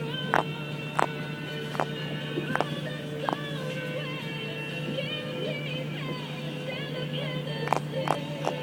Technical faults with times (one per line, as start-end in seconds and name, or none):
none